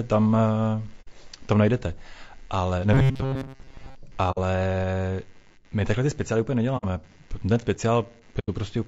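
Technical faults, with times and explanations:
Throughout: computer activity noise. A faint buzz pulsing at around 100 Hz sits about 35 dB below the speech. It rises and falls with the computer's processing load rather than with the talker, because current drawn by the machine modulates the ground shared with the audio circuitry.
Throughout: low-delay AAC compression. The speech sounds plainly rough and grainy, with noise filling the gaps between harmonics and a thin, artificial upper band. This points to a low-delay codec such as AAC-ELD at 32 kbps, whose short frames resolve pitch poorly at that rate.
1.01 to 1.08 s, 4.31 to 4.38 s, 6.77 to 6.85 s, 8.39 to 8.49 s: AAC frame loss with muting. Soft-edged gaps appear just before "tam najdete ale" and just after "takhle ty speciály úplně". The first three last 60 ms and the last lasts 90 ms, which fits two or three lost frames. Their spectrum was zeroed, and the overlapping windows fade the audio out and back in.
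2.93 to 3.96 s: robotic sound from repeated short buffers. After "tam najdete ale", the speech becomes a rigid metallic buzz at 134 Hz that still loosely tracks the speech. A repeated chunk of about 7.5 ms, standing in for roughly 70 percent of the audio, is the likely cause, each repeat imposing that fixed pitch.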